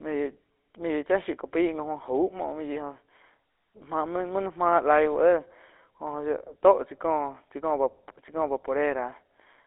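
Throughout the speech, the signal has passed through the GSM full-rate codec, which rebuilds the voice from a vocal-tract model driven by evenly spaced excitation pulses and keeps only part of the excitation detail. The plainly audible damage fits the 13 kbps GSM full-rate scheme: a buzzy, gravelly roughness. The audio is also confined to a telephone band of 300 Hz to 3.6 kHz, so it sounds thin and lacks both low body and upper brightness.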